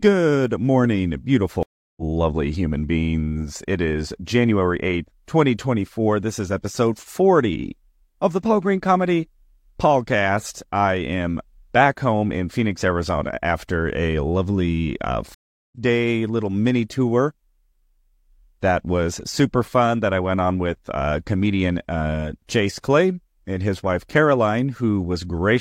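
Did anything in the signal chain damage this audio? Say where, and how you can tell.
Yes, a network stream reconnect: 340 ms and 377 ms silences at 1.63 s and 15.34 s, then speech resumes roughly 0.2 s and 0.4 s further on. Unlike a dropout, it skips ahead.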